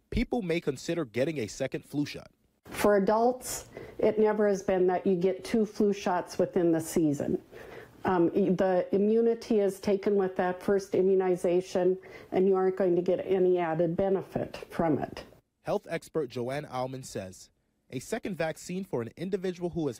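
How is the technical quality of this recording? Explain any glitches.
No glitches turn up anywhere in the recording. Nothing in the audio stands out as a technical fault worth explaining.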